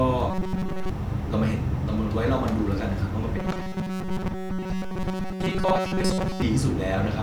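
From 0.31 to 0.90 s and again from 3.38 to 6.42 s, the speech turns into robotic sound from repeated short buffers: a rigid, metallic buzz fixed at 188 Hz. This likely comes from a roughly 5 ms chunk being looped while most real audio is skipped. Unlike a stutter, the loops fuse into one steady tone.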